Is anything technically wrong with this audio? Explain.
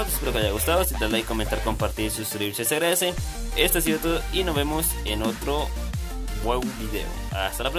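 No, there's nothing technically wrong with this audio.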